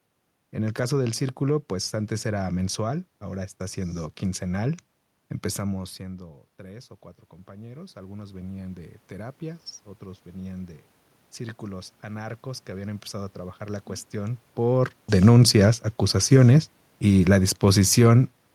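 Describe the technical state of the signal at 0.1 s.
At 0.1 s the signal is intact, with only the room's own background noise present as part of the recording.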